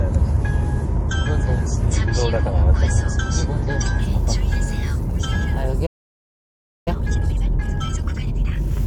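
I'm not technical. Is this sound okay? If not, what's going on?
No, there are three problems.

For the first 4 seconds the sound is dull and smeared, with the crisp, high detail missing. At 4.0 s it suddenly becomes clearer and fuller, with no break. This is an adaptive stream starting at a low bitrate. The player began with a small, lower-quality version so playback could start quickly. Once it had checked the connection, it switched to a better version.

At 5.86 s the sound cuts out completely. It stays silent for about 1 second and comes back at 6.88 s. This is a playback stall. The likely cause is that the player ran out of incoming data, or was briefly held up, so it had nothing to play until it recovered.

From 6.88 s to 8.76 s the sound is rushed. It plays about 1.5 times faster than normal but at its usual pitch. This is time-compressed catch-up. After the stall the player was behind, so it removed many tiny slices of the sound and blended the joins together to get back on schedule. 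That slicing is what causes the hurried feel.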